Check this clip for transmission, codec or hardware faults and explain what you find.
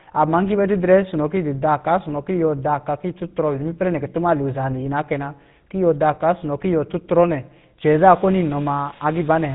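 One codec fault runs through the whole speech clip. GSM full-rate codec, throughout: a vocal-tract model driven by sparse, regular pulses, fitting 13 kbps, removes everything above 3.8 kHz, leaving plainly audible buzzy, gravelly roughness.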